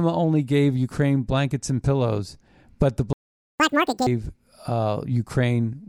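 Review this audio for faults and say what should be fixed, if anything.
The speech cuts out at 3.13 s and stays silent until 3.60 s, a gap of about 0.47 s, before resuming. This is a playback stall: output stopped mid-flow because the player likely ran out of buffered data or had its audio thread blocked, and nothing was written to the device until it recovered. To prevent it, keep a deeper playback buffer and run the audio thread at high priority so it never starves.

From 3.60 s to 4.07 s the audio plays at twice normal speed, with pitch raised by around ten semitones, then drops back to normal. This is catch-up at higher speed: after the stall, the player resampled its accumulated backlog faster to win back the lost time, which shifts pitch along with tempo. To prevent it, recover from stalls by dropping or time-stretching the backlog without changing pitch rather than by plain resampling.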